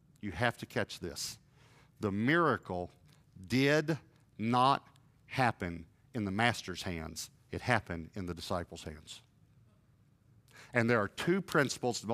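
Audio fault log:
Nothing to log here; I didn't catch a single problem anywhere in the recording.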